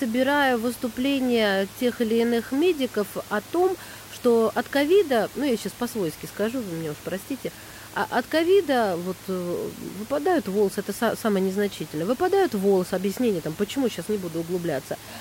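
No technical faults are audible in the speech; the room noise sits about 19 dB below the voice and belongs to the recording itself.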